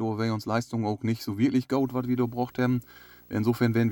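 At 1.72 s, just after "auch nicht so wirklich", a video or display buzz comes in and runs to the end of the clip. A screen or video cable is coupling into the audio path. The buzz sits at 59.94 Hz, the picture's field rate, with a hash of harmonics above it. A very high line-rate tone near 15.7 kHz is also present. The interference sits around 30 dB below the speech.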